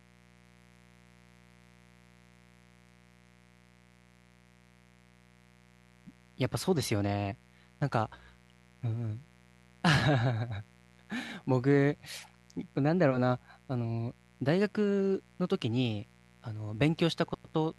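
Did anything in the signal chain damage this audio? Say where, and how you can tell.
Yes, in the analogue wiring: a mains buzz at 60 Hz runs under the speech for the whole clip, roughly 30 dB down. Switching spikes from an unshielded or dimmer-fed path show as evenly spaced horizontal harmonic lines on a spectrogram, climbing into the kHz range.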